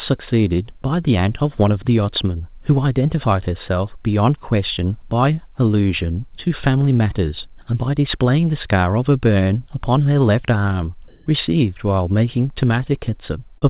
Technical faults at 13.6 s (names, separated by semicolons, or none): short concealed packet loss